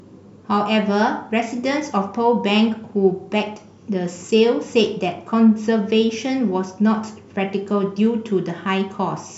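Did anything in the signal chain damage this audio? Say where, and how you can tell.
No, nothing in the signal chain damaged this audio.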